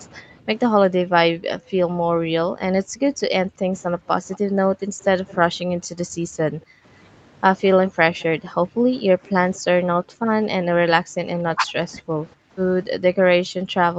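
From 0.08 to 6.85 s the speech dips and cuts out in pieces, around four seconds in all, falling by as much as about 40 dB. This is speech suppressed in double talk, likely an echo canceller turning down the near talker because it could not separate them from far-end audio arriving at the same time. Within that stretch, at 4.31 to 4.38 s and 5.02 to 5.34 s, faint scraps of the voice repeat 216 ms late, about 25 dB below the speech. This is an echo leak, likely loudspeaker pickup that the canceller failed to remove and sent back. The same delayed copy returns at 7.88 to 8.23 s. From 7.72 s to the end, the suppression resumes with similar dropouts of up to about 40 dB.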